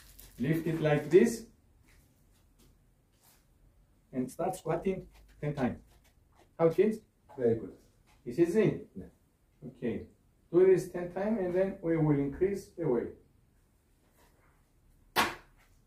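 From 4.16 s to 7.12 s the audio runs about 1.56 times faster while pitch holds, giving a clipped, rushed pace. It is likely a time-stretched section, squeezed by dropping short slices, with abrupt tempo changes at both boundaries.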